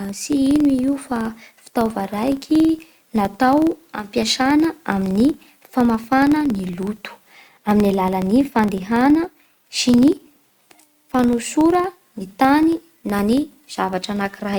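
A steady low buzz of ticks at about 21.5 Hz runs under the speech from start to finish, growing louder as the voice gets louder. It comes from a filter restarted on every block, which fits a 2048-sample block. The filter drops its memory and begins each block from silence, so every block boundary starts with a small transient.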